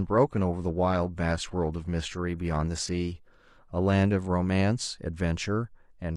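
Adaptive stream starting at a low bitrate, 0.0 to 4.0 s: the player began on a cheap version to start quickly. Speech has thin, synthetic treble, fitting 24 kbit/s HE-AAC. At 4.0 s it jumps, gaplessly, to clearer sound suggesting 96 kbit/s AAC-LC.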